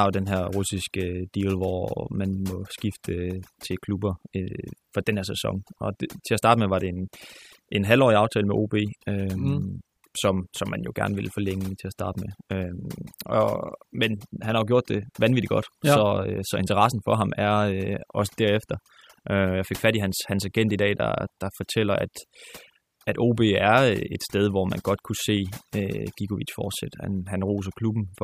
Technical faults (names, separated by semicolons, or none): overdone noise removal